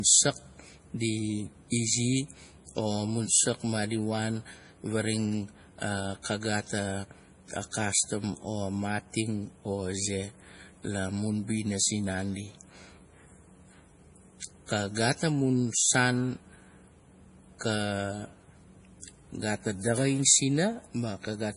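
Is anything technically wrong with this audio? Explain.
Yes, the whole clip carries heavy MP3 compression damage, most likely from an encode at a very low bitrate, with the sound pointing to something around 32 kbps. With so few bits the encoder chops the treble, leaving nothing above about 10.5 kHz, and drops quieter frequency lines that then flicker on and off between frames. On this speech that gives a watery, swirly texture, metallic chirps on the s sounds, and smeared consonant attacks from start to finish.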